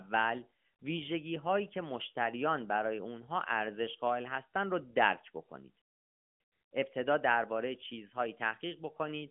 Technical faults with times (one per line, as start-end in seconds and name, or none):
none